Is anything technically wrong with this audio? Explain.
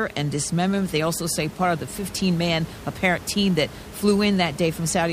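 No, the speech signal shows no technical faults, and the only thing beneath it is the room's own background noise, sitting about 17 dB below the speech as part of the recording.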